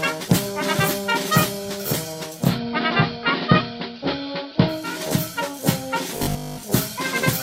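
Two faults. From 2.23 to 5.05 s there's digital radio blending to analogue: it cross-fades over about 374 ms into AM, level shifts about 2 dB, hiss sits roughly 35 dB down. Then at 6.17 to 6.63 s it turns into a rigid, metallic 50 Hz buzz, likely robotic sound from repeated short buffers, which fits a 20 ms buffer repeating most of the time.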